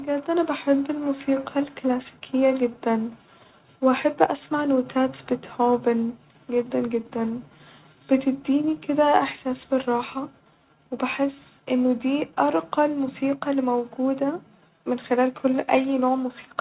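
No technical faults can be heard anywhere in the recording. The speech comes over a call connection with a telephone-band sound and nothing above 4 kHz, which fits a G.711 mu-law codec.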